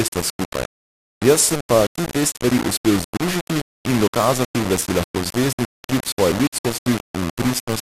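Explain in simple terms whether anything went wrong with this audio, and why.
The whole clip sounds coarse and gritty, most likely from low bit depth without dither. It sounds like only about four bits per sample, so each sample is rounded to a handful of steps. That grain follows the speech and is only somewhat quieter than the speech itself.

On top of that, the speech is dull and has a gurgly, watery texture throughout, likely from heavy MP2 compression. The codec had too few bits to share out, so the upper frequency bands drop away or flicker, and what's left sounds rough.

There are also two bursts of DAB burbling over the speech. One is a tiny blip at 2.75 s, right after "ti dve stvari". The other is longer, from 6.29 to 6.46 s. Bit errors from weak reception slipped past error correction, so short blips of noise land in single bands.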